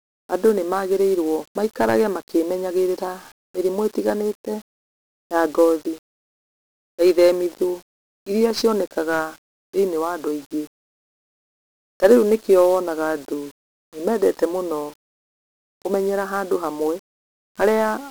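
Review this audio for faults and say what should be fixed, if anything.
1-bit DFPWM compression runs through the whole speech recording. Each sample keeps only one bit that nudges an adaptive level up or down, so heavy broadband quantisation noise leaves everything fuzzy and crackly, with treble buried in hiss. This is a roughly 48 kbps stream, and its broadband hiss is unlike the warbly, band-limited swirl of a perceptual codec. To prevent it, keep the speech in a multi-bit PCM or a proper perceptual codec rather than this one-bit format.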